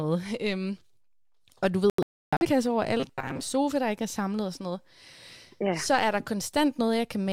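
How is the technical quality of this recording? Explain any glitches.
Two glitches stand out in the speech, both in the first half: a broadcast-style dropout and a short stretch of robotic buzzing.

From 1.90 to 2.46 s, right after "og du", there's a digital broadcast dropout. The receiver stopped getting usable frames and muted until good ones came back, so the audio falls into silence in a few holes spread over about 512 ms. That adds up to roughly 427 ms of missing sound, which fits about ten lost frames. The longest gap runs near 299 ms, and whatever was said in those holes is simply gone.

Then from 3.00 to 3.40 s, just before "sofa der ikke er", you get robotic sound from repeated short buffers. It's likely that audio was arriving too slowly and the playback filled the gaps by looping a tiny chunk, with about half the stretch being repeats rather than fresh audio. That looping stamps a fixed 133 Hz buzz onto the voice, which points to a buffer around 7.5 ms long, so it turns metallic and rigid while still roughly tracking the speech.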